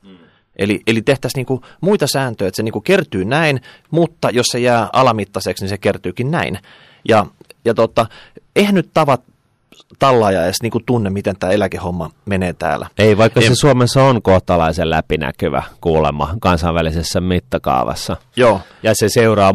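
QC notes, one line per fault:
Throughout: hard clipping. The speech was driven about 9 dB past what the signal path could carry, so every loud peak is sliced flat at the ceiling. Only a small fraction of the samples, around 2 percent, hit that limit. Those flattened tops create harmonics high in the spectrum that the original never had. The result is a harsh, gritty crackle that rides on stressed syllables and louder moments rather than a constant fuzz.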